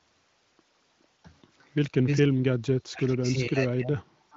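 An echo canceller likely confused the talker with loudspeaker echo while both sides spoke, so speech suppressed in double talk follows. At 1.24 to 1.28 s the speech dips slightly. From 2.05 to 4.04 s it is pushed down very deeply, cutting out in pieces for about one and a half seconds in total.

From 4.31 s to the end, an echo leak likely appears where a loudspeaker's echo was not fully cancelled. A faint copy of the speech returns about 0.43 s late, far below the main voice.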